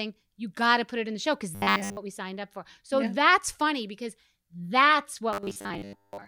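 Audio likely arrived too seldom, so the software repeated 10 ms buffers, skipping most of the real speech. From 1.55 to 1.97 s, after "in the show because", and again from 5.33 to 6.27 s, after "that's funny because that's", this produces robotic sound from repeated short buffers: a rigid, metallic 100 Hz buzz.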